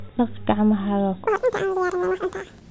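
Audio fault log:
1.27–2.70 s wrong sample rate: speech turns high and hurried, an octave up at twice the speed, which fits 8 kHz audio played back at 16 kHz without conversion.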